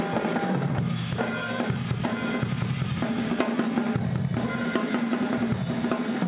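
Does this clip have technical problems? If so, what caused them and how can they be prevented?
No, this clip has no technical problems, so there is nothing to prevent.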